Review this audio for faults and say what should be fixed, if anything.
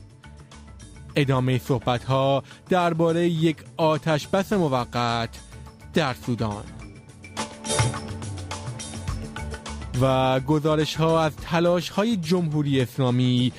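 Nothing stood out on listening, so there is nothing here that needs fixing.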